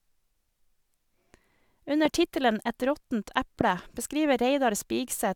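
Loud pops hit this speech clip at 2.05 to 2.08 s and again at 3.61 to 3.63 s, each a single sharp click peaking something like 15 dB above the speech, which continues underneath. They are likely voltage pulses from a plug, switch, static discharge or driver glitch, briefly shaped by the following circuitry.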